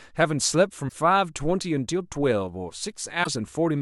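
At 0.85 s the speech breaks into a short glitch that lasts until about 0.93 s, and at 3.20 s a similar blip runs to 3.27 s. Both come from damaged data in the compressed stream. Some of the encoded bytes there were lost or overwritten, so the decoder misreads those frames and loses sync. It then hunts for the next valid frame header, and for those 70 to 80 ms you hear a brief glitch in place of the speech.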